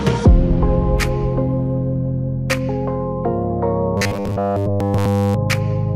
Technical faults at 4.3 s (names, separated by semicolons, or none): robotic sound from repeated short buffers